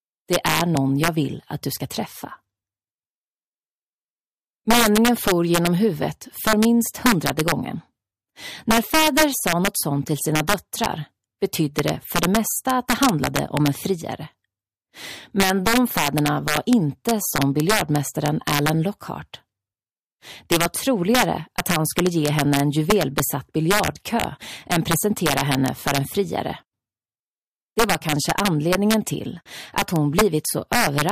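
Integer overflow runs through the whole clip: with the signal driven about 4 dB past full scale, roughly one sample in two hundred wraps to the opposite extreme instead of being limited, giving violent cracks on loud peaks. The waveform shows full-height spikes flipping across the range, and the spectrogram shows broadband vertical streaks.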